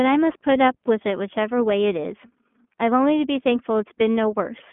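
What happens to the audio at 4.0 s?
At 4.0 s the speech sounds thin, slightly rough and synthetic, with the plainly audible roughness that runs through the whole clip. The band stops near the telephone range of 200 Hz to 3.4 kHz, and nothing passes above 3.8 kHz. This is iLBC codec damage: each 20 ms frame's excitation is coded on its own, without drawing on the previous frame, which fits the 15.2 kbps mode.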